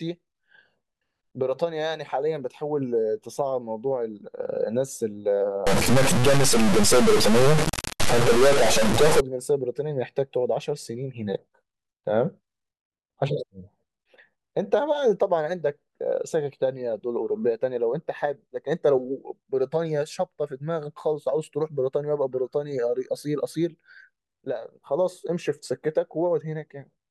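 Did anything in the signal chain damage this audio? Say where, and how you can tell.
Yes: a stuck bit from 5.67 to 9.20 s. Harsh buzz and noise-filled pauses point to a converter data line, likely held fixed, shifting samples by about -15 dBFS.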